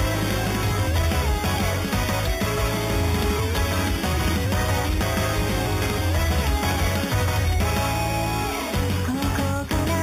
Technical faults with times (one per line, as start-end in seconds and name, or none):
0.00-10.02 imaging from sample-and-hold upsampling